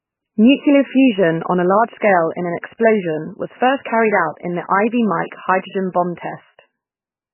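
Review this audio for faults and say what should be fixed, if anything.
Heavy MP3 compression damage runs through the whole speech clip, likely from encoding at a very low bitrate, roughly 10 kbps. The encoder has cut everything above 3 kHz and is dropping weak frequency lines that flicker on and off between frames, giving a watery, swirly texture and smeared consonant onsets. On a spectrogram this shows as a hard flat ceiling at 3 kHz with patchy, blocky holes below it. To prevent it, encode at a much higher bitrate or keep the recording in a lossless format.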